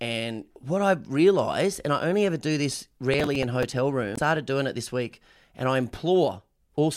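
From 3.14 to 3.72 s a gritty, tearing crackle rides over the speech. This is processor overload crackle: the processor repeatedly missed its deadlines, and about ten short buffers, around 5 ms each by the sound of it, were replaced with repeated stale audio.

At 4.14 to 4.19 s a brief glitch cuts in. That points to damaged data in a compressed stream: corrupted bytes made the decoder misread frames and lose sync until it found the next frame header.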